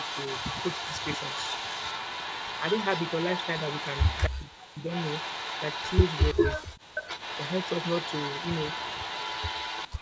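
A delayed second copy of the speech trails it by 338 ms from 0.0 to 4.26 s, only slightly quieter, then fainter from 4.9 to 6.55 s and at 404 ms from 6.95 s to the end: echo leak, likely a far-end loudspeaker echo the canceller missed. At 4.27–4.88 s and 6.56–6.95 s the speech drops out steeply, likely speech suppressed in double talk as the canceller ducked both sides.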